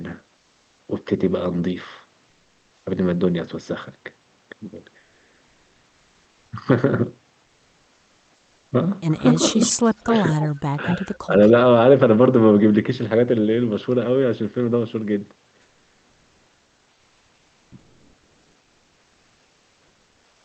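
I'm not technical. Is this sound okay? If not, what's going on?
No. Comfort noise in place of the background appears at 0.37–0.79 s, 2.29–2.83 s and from 15.61 s to the end. The real background gives way to a flat, slightly quieter hiss, likely because the call stopped sending sound during pauses.

Echo leak occurs at 9.28–10.48 s and 10.87–10.95 s. A faint, delayed copy of the voice trails about 0.22 s behind, likely from a loudspeaker's sound slipping past the echo canceller.

Speech suppressed in double talk occurs at 9.53–9.58 s, 10.03–10.12 s and 10.75–11.34 s. The voice briefly dips or drops out while both sides speak, likely because the echo canceller turned everything down.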